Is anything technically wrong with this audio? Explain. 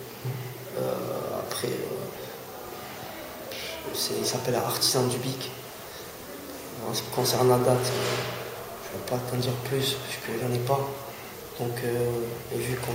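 Yes. From 10.65 to 12.64 s there are periodic USB or driver dropouts. Every 0.5 s a stalled transfer drops about a millisecond of audio, filled with silence. This is heard as about five regular ticks, visible as tiny flat gaps in the waveform and thin vertical broadband lines on a spectrogram.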